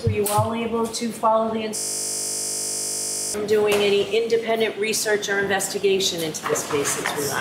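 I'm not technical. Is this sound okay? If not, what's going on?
No. A system hang loop from 1.76 to 3.34 s: the computer froze and replayed one 20 ms scrap of sound, making a 50 Hz buzz that covers about a second and a half of audio.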